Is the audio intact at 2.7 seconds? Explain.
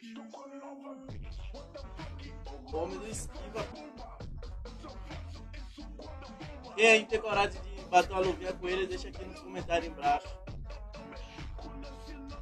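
No. Between 2.70 and 2.75 s the audio has compressed frames skipped. Whole coded frames, about 46.4 ms each, never reach the output, either because they are missing from the stream or because the decoder rejected them as corrupt. The sound jumps forward by roughly a fifth of a second, which fits about five lost frames.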